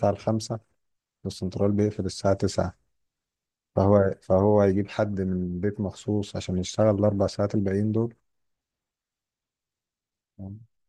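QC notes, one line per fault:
No faults detected.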